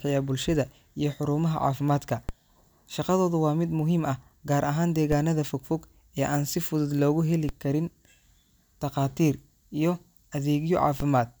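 A speech clip with four DC steps, at 2.29 s, 5.12 s (right after "gaar ahaan"), 7.49 s and 11.00 s. At each one the waveform's zero line suddenly jumps, like a converter recalibrating or an offset input being switched in, so you get a low thump or click while the speech carries straight on. The offset doesn't hold. It bleeds away the way a 20 Hz high-pass would drain it.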